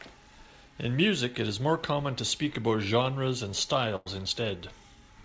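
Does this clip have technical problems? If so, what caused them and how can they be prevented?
Yes. There's a burst of packet loss in this speech from 3.96 to 4.08 s. Roughly 100 ms of audio never arrived in time, so the receiver stretched out the last bit of sound it had and faded it down across the gap. You hear a brief held or smeared patch, and then the speech picks up again slightly further along, with that stretch missing. The call path's codec sound, with nothing above 8 kHz, points to G.722. To prevent it, give the call a steadier network connection and a bit more jitter-buffer headroom.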